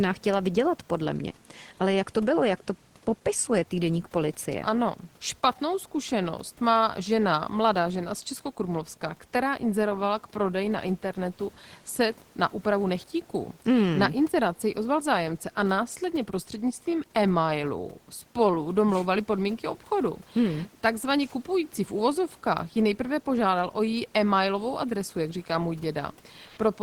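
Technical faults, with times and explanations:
26.47–26.57 s, comfort noise in place of the background: the sender likely stopped transmitting during a pause in the speech, as a discontinuous-transmission mode such as Opus DTX would, and the receiver filled the 100 ms gap with generated noise. The genuine room noise, about 34 dB below the speech, is swapped for a smooth, featureless hiss whose level shifts by about 5 dB, so the background briefly loses its texture and steps in loudness.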